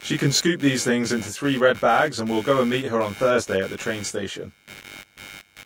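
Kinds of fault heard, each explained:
Computer activity noise: Processor, graphics or mouse load shifts the ground shared with the audio circuit. Here it is a noise pulsing around 100 times a second, roughly 20 dB below the speech. It persists throughout, following the computer rather than the talker.
Channel delay (comb filtering): One channel arrives around 20 ms late, and the two are mixed to mono. Shared content cancels at regularly spaced frequencies, starting near 20 Hz. The speech sounds rough and slightly doubled throughout.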